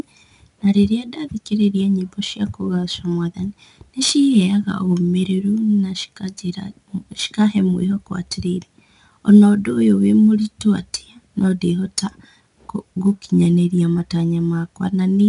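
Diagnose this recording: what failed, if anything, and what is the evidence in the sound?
The codec stage failed. 4-bit ADPCM compression runs throughout the speech. Each sample is a coarse 4-bit step from a prediction, so a gritty hiss follows every loud syllable. Nothing lies above 10.6 kHz, which fits a bitrate around 88 kbps.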